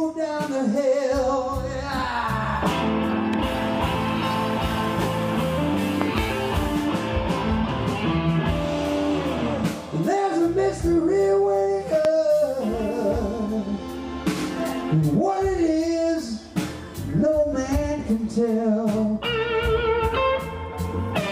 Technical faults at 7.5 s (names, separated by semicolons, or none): none